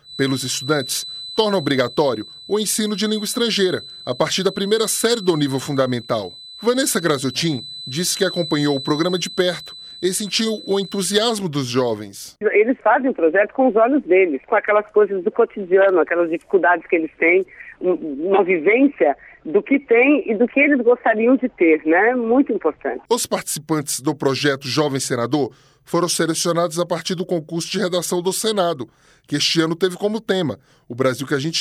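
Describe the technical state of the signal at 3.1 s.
At 3.1 s a feedback whistle is sounding, from the start to 11.33 s: a thin 4 kHz tone some 15 dB under the sound. Likely a speaker-to-microphone loop held at the edge of feedback, it wavers in level, unlike a fixed electrical tone.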